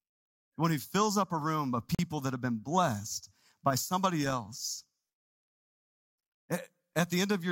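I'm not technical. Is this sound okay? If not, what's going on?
No. At about 1.95 seconds the speech drops out to silence for roughly 41 milliseconds, ending at 1.99 seconds, and then carries on. That short gap is most likely a Bluetooth stall: radio interference delayed the wireless data, the headphones used up their small store of audio, and playback paused until the missing data arrived. The gap is brief, so it sounds like a tiny hiccup rather than a long dropout.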